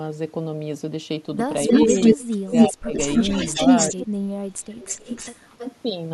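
From 1.67 to 2.69 s there's an echo leak: a copy of the speech comes back about 297 ms late and louder than the speech itself. The likely cause is the far end's echo canceller letting its loudspeaker pickup through. It returns from 2.94 to 4.04 s at 304 ms, still a bit above the speech, and again from 4.8 to 5.77 s at 315 ms, now well underneath it.

Overlapping those, the speech is suppressed in double talk from 2.15 to 2.94 s and again from 3.92 to 4.79 s. With both sides talking at once, the canceller likely couldn't separate talker from echo, so it pulled everything down. The speech dips by something like 30 dB for roughly half a second the first time and most of a second the second time.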